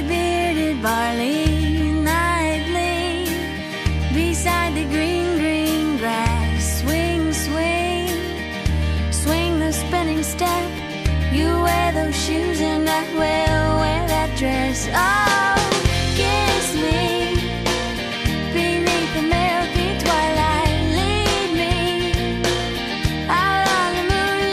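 Nothing goes wrong anywhere in the clip, so there's nothing to point to here.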